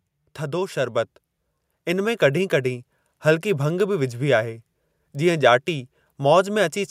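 Automatic gain rising runs from 0.17 to 1.16 s: the gain control judged the incoming level too low and lifted its gain by about 4 dB over roughly a second, so the speech and the background noise swell up together rather than the talker getting louder.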